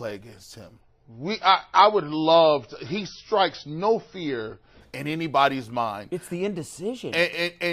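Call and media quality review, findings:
Adaptive stream at a lower bitrate, 0.81–4.81 s, after "against him" until "in anybody's mind": abrupt drop, no gap, nothing above 6 kHz, more codec artefacts. Fits an MP3 switch from 128 to about 24 kbit/s.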